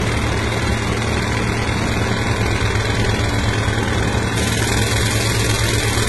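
Transcoding between lossy codecs affects this everyday-sound recording throughout. Nothing survives above 11.7 kHz, and two layers of smeared, swirly artefacts sit together, likely from a low-rate HE-AAC encode re-encoded to AAC-LC at around 48 kbit/s. Pre-emphasis left on runs from 4.37 s to the end at 6.09 s. The treble boost, which fits the 50 µs FM curve, was never undone, leaving 10 kHz about 10 dB hotter than 1 kHz and the sound thin and harsh.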